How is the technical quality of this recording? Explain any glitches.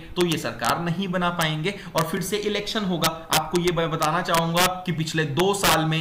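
The recording has two kinds of glitch: integer overflow and one block of digital silence.

Integer overflow occurs at 0.21–0.70 s, 1.41 s, 1.98–2.01 s, 3.04–4.66 s and 5.40–5.74 s. Peaks exceeding the integer range wrap to the opposite sign instead of limiting, overdriving by about 1–2 dB early and about 6 dB later. The result is cracking on peaks that is sharper than clipping.

A block of digital silence at 2.17 s drops in 2.67 ms of zeros, which fits one 128-sample buffer left unfilled. Because the cut has no fade and is this short, it is heard as a tick, not a gap.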